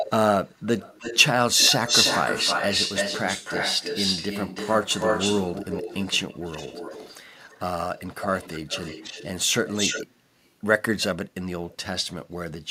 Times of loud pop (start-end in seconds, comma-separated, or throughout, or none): none